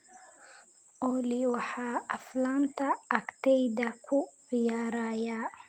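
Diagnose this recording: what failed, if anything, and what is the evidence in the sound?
Nothing failed here as far as listening can tell: the speech runs on with no dropouts, clicks or distortion anywhere along the chain.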